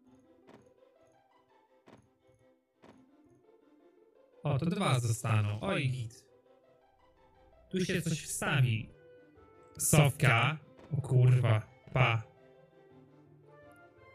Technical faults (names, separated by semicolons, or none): channel delay (doubling)